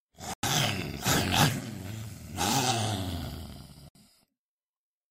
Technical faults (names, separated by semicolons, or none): digital broadcast dropout